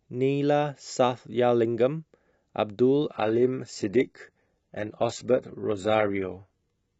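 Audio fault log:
3.11 to 7.0 s, adaptive stream at a lower bitrate: the speech abruptly drops in quality as codec artefacts rise, with no gap, which fits a connection slowdown forcing a switch from a 96 kbit/s AAC-LC stream down to something like 16 kbit/s HE-AAC.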